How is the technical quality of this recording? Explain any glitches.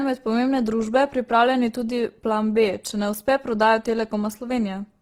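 Technical quality is poor: plainly audible compression damage runs through the whole recording.

Opus compression, throughout: the speech sounds rough and grainy, with a noisy texture on voiced sounds. The likely cause is Opus in its music (CELT) mode at a low bitrate, around 16 kbps. Short of bits, the encoder preserves each band's overall energy but fills the fine detail with noise or folded copies of lower bands. On a spectrogram, harmonics look smeared and speckled rather than cleanly striated, while the upper bands stay filled instead of showing holes. The waveform envelope looks normal.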